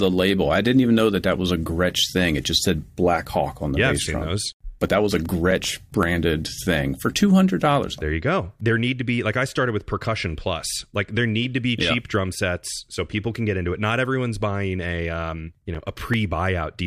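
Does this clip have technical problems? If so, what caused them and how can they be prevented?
Yes. CD scratch ticks occur from 4.99 to 6.03 s (nine ticks) and from 15.49 to 16.40 s (eight ticks). Each is a brief dropout of a few milliseconds. A surface blemish defeats error correction once per disc revolution, and the player conceals the damaged samples. Cleaning or resurfacing the disc, or ripping with a secure extraction tool, prevents it.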